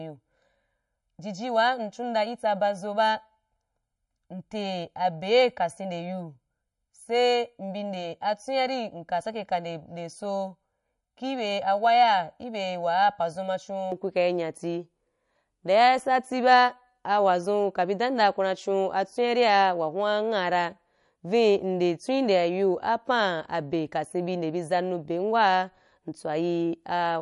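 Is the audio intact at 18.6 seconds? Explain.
No. At 18.6 seconds, as across the whole clip, the speech carries plainly audible MP3 compression damage, likely from a low bitrate near 46 kbps. Nothing remains above 11.1 kHz, and weak spectral lines dropping in and out frame to frame leave a watery, swirly texture with smeared consonant attacks.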